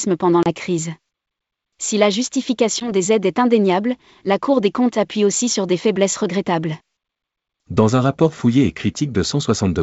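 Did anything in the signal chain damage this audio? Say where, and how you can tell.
Yes, at the network stage: packet loss on an ADPCM call at 0.43–0.49 s and again at 2.80–2.91 s, just before "aides est indéniable la". The first hole is about 30 ms of silence, roughly three packets; the second is about 10 ms, around one. The gaps have hard edges, and after each the speech returns slightly distorted before settling. That recovery tail is what sets it apart from a plain dropout: the decoder's adaptive predictor and step size lost step with the sender during the gap and needed some tens of milliseconds to realign.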